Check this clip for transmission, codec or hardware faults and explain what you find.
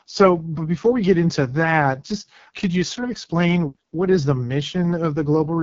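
The speech carries one fault throughout: AMR wideband (HD Voice) codec damage. The pulse-driven vocal tract model, starved of bits, makes the voice rough and raspy, which fits the lowest 6.6 kbit/s mode. Nothing sounds above 7.2 kHz. Narrowband AMR would stop near 3.4 kHz instead.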